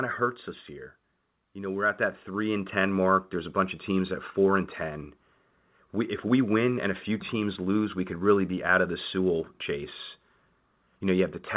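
From 0.05 to 0.86 s the speech starts loud and then sinks by about 4 dB, its background dropping with it. This is automatic gain falling: the gain control judged the input too hot and gradually pulled its gain down.

From 1.53 to 3.87 s the level climbs again, voice and background swelling together by about 7 dB over more than two seconds. This is automatic gain rising: the control now judged the input too quiet and gradually raised its gain. Throughout, the sound stays within a narrowband telephone bandwidth with nothing above 4 kHz, which points to a G.711-style call codec.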